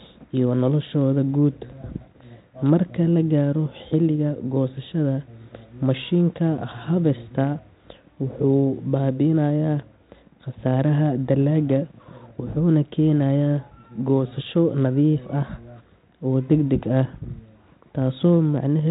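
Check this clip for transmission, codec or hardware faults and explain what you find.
No faults found; the speech sits in a 32 kbit/s G.726 ADPCM telephone band with nothing above 3.8 kHz, as that coding path allows.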